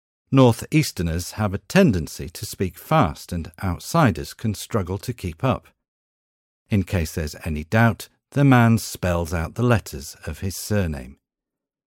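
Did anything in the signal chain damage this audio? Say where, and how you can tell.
No, nothing in the chain audibly damaged this speech.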